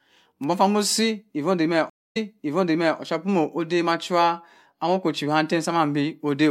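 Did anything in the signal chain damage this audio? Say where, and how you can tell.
Yes. A stream reconnect at the network stage: the speech drops to 256 ms of silence from 1.90 s, then resumes 836 ms earlier, repeating material until 2.99 s. The waveform shows a flat gap, a soft restart as the fresh decoder begins, and spectrogram patterns that duplicate the preceding stretch.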